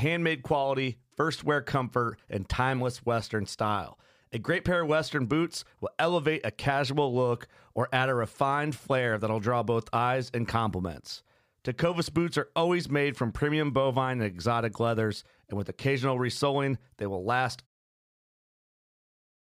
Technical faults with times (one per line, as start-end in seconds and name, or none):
none